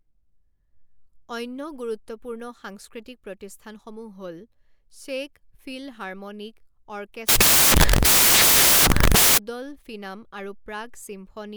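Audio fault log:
7.29–9.38 s, samples built from the wrong bytes: the speech gives way to loud, harsh broadband noise for about 2.1 s because each sample's bytes are misassembled, so the jittery low bits become its large part.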